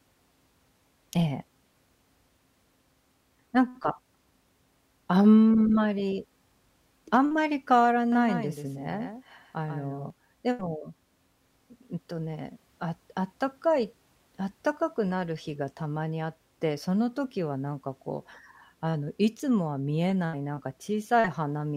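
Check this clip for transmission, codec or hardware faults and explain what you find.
One fault is present: a doubled audio track from 8.12 to 10.10 s. The audio was likely captured twice, with a second, slower path mixing in a copy about 5 dB quieter and roughly 150 ms late. The result is a dry, full-band slapback echo that starts and stops abruptly.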